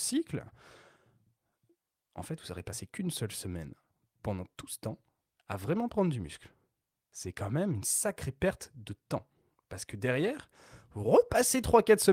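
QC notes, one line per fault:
No faults found in this speech clip. Nothing in it calls for a timed entry.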